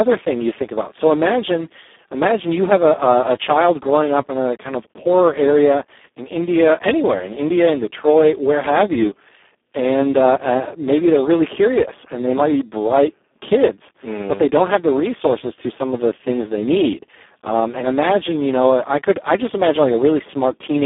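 From start to finish the speech is squeezed through a Speex codec at heavy damage, which fits a rate around 4 kbps. It sounds hoarse and buzzy, almost robotic. The band sits roughly 250 Hz to 3.5 kHz, with nothing above 3.8 kHz.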